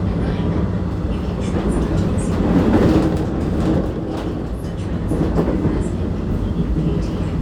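Everyday sounds, with no technical faults to report.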